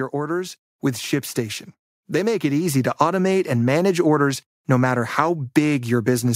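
From 2.06 to 3.0 s the automatic gain control misjudges the input as too quiet and steadily lifts its gain by about 4 dB. The result is automatic gain rising: the speech grows louder over roughly a second, and the background noise floor swells right along with it, because the gain stage cannot tell one from the other. The level does not jump. It creeps upward, so the room sound seems to push closer as the voice gets louder.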